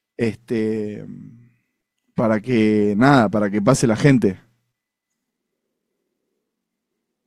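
No technical faults detected.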